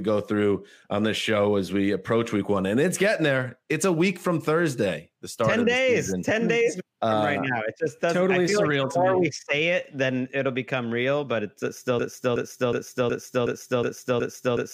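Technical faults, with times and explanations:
12.0–14.7 s, broken-record loop: a 368 ms fragment repeats exactly, back to back, seven times, running to the end of the clip. The playback chain likely stalled and kept resending the last fragment it held, so the audio due in those final seconds is lost.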